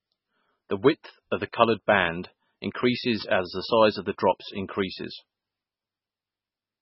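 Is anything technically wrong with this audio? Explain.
Yes, there are two problems.

Throughout the speech, the audio is heavily degraded, most likely by MP3 encoding at a very low bitrate, around 16 kbps. With so few bits, the encoder drops weaker frequency components, which then switch on and off from frame to frame, and it removes everything above 5.6 kHz. The result is a watery, swirling texture with metallic chirps on s sounds, smeared attacks, and dull, missing treble.

From 0.27 s to 6.66 s, word clock ticks occur roughly every half second, about fifteen in total. The receiving device runs on its own clock, not locked to the sender's, and the two differ by around 40 ppm. Each time they slip past each other, one sample is dropped or repeated. Each slip is heard as a sharp tick of uneven strength, recurring at that steady rate.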